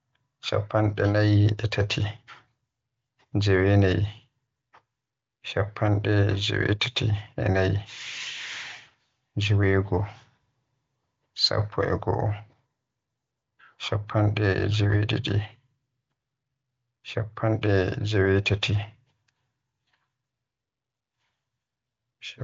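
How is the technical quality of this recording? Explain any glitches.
No glitches or faults found.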